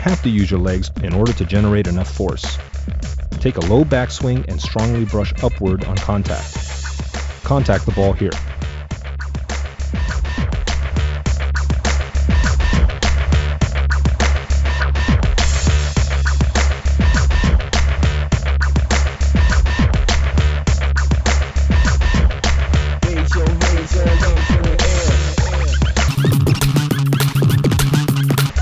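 From 26.08 s to 28.50 s, a wrong sample rate fault appears. The samples play back at twice their intended rate with no conversion, which fits 16 kHz audio being played at 32 kHz. Speed doubles and pitch rises 12 semitones, a full octave. The sound turns high and hurried.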